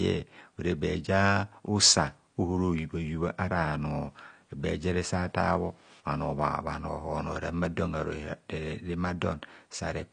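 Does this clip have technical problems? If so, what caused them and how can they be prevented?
Yes. Throughout the speech, nothing is present above 9.8 kHz, and sibilants and sustained sounds have a dull, smeared, fizzy texture. This is likely AAC compression: the encoder discards high frequencies and coarsely quantises what remains, which fits a bitrate around 32 kbps. Encoding at a higher bitrate or exporting losslessly prevents it.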